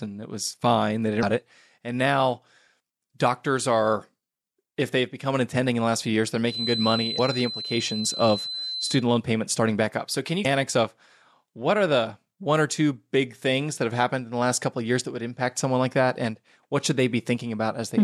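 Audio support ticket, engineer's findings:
Damaged data in a compressed stream: short glitches at 1.19–1.24 s, 7.15–7.19 s and 10.41–10.47 s (before "of what are the"). Decoder loses frame sync and searches for the next frame header. Broadband smear on spectrogram, abrupt waveform discontinuity.

Feedback whistle: steady 4 kHz tone from 6.44 to 9.05 s, after "last few years they're", until "loan payments starting back". It sits well below the speech and swells and fades slowly. Likely loudspeaker-to-microphone loop near the point of feedback. Thin horizontal line on spectrogram.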